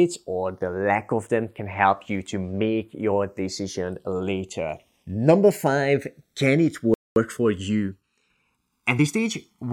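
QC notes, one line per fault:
Throughout: channels drifting apart. The two channels appear to be clocked independently, with a mismatch on the order of 150 ppm, so the delay between them keeps growing and reaches roughly a millisecond by the end. Folded to mono, that creeping offset makes the comb-filter notches glide slowly across the spectrum, giving the speech a gradual, hollow flanging sweep instead of a fixed coloration.
6.94 to 7.16 s: playback stall. The output drops to silence for about 0.22 s partway through the speech and then resumes. The likely cause is the player's buffer running dry or its audio thread being held up, leaving nothing to send to the output until data arrived again. The gap lands abruptly, cutting the flow of speech rather than falling at a natural pause.
7.16 to 9.36 s: time-compressed catch-up. Right after the gap, the player works off its accumulated backlog by dropping short slices of audio and cross-fading across the joins, running about 1.1 times faster than normal while keeping the original pitch. 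The speech sounds slightly rushed for those two seconds or so, until normal pacing returns.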